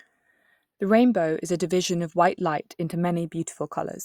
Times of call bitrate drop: none

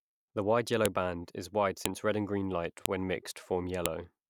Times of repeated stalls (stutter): none

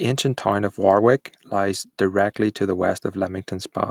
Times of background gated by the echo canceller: none

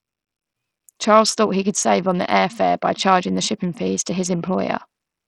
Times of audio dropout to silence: none

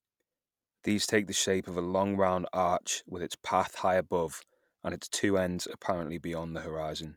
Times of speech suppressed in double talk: none

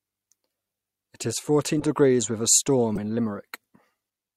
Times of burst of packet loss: none

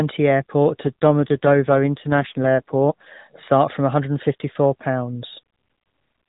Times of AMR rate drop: 0.86-3.13

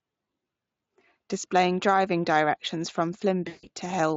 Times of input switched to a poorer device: none

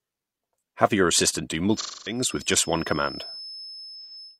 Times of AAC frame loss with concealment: 1.76-2.21, 4.02-4.12

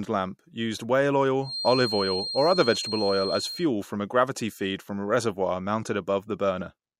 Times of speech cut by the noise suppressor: none

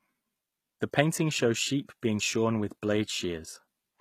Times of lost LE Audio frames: none

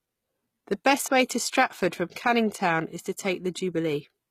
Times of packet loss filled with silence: none

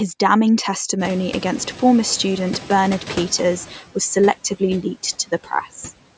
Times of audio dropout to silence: none

